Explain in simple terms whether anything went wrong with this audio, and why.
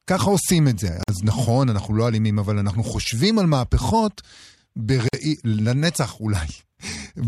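Two short silences cut into the speech, at 1.03 to 1.09 s and 5.09 to 5.13 s, each about 50 ms and about 4 s apart. This is a gap at a join of encoded pieces: separately encoded sections were joined with their padding silence left in.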